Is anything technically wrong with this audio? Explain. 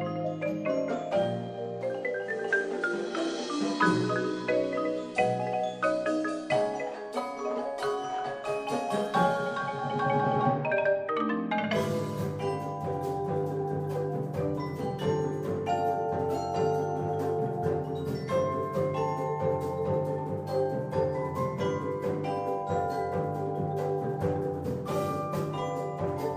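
Yes. From 2.07 s to 7.13 s the audio is a digital radio blending to analogue: the receiver lost its digital stream and cross-faded, over about 0.39 s, to the station's FM broadcast, then faded back. During that stretch a faint hiss sits roughly 40 dB below the programme, and the level shifts by about 3 dB.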